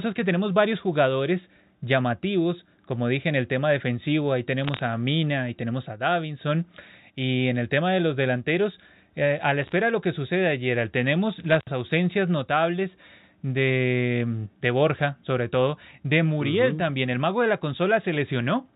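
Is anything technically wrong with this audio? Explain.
Yes. Short bursts of sharp ticking crackle sit over the speech at 4.64–4.81 s after "el tema defensivo ahí", 9.62–9.72 s after "delanteros eh a la", and 11.50–11.63 s after "que sucede ayer tenemos". These are bit errors on a digital phone line. Flipped bits, a few tenths of a percent of them, each corrupt a single sample of the A-law telephone signal, and hits on sign or high bits produce the ticks.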